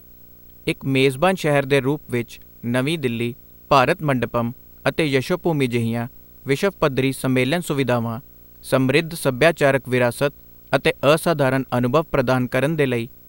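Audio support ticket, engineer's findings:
Buzz near 60 Hz with hash above, plus a 15.7 kHz whine, throughout, well below the speech. Video or display buzz: screen or video cable coupling in.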